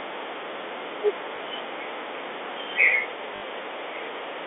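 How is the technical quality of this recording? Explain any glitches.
The recording has two brief dropouts over a telephone-band G.711 channel, which limits the sound to roughly 300 Hz to 3.6 kHz.

Packet loss with last packet repeated, at 1.36 to 1.38 s and 3.36 to 3.42 s: the receiver replayed the previous audio to fill the gaps, giving a small blip at the first and a buzzy robotic stutter at the second. The 20 ms and 60 ms lengths fit one and three lost packets.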